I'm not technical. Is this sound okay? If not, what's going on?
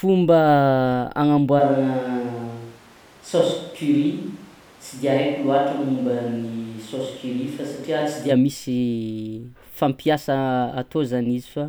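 No. From 1.6 to 8.3 seconds there's a switch to a distant microphone, likely from losing the close mic. The speech turns roomy and hollow, with thinner bass and more background noise.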